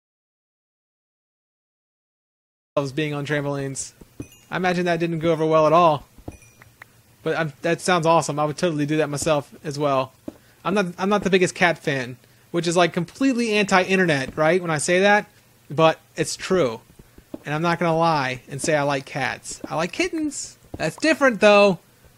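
From the very start until 2.76 s the clip is an audio dropout to silence: complete silence with no room tone at all, already under way when the file begins, before the sound cuts in abruptly. The likely cause is the input being lost, through a disconnected device, a failed link or a mute, while the recorder kept writing silence. On a waveform this is a flat line; a spectrogram shows a blank region ending in a sharp vertical edge.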